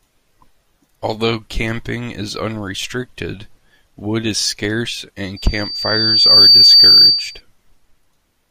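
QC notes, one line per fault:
5.36–7.41 s, loudspeaker feedback squeal: after "unrestricted wood is scarce", mic-to-speaker loop gain exceeds one at 4.6 kHz, so that tone swells over about a second, well above the speech.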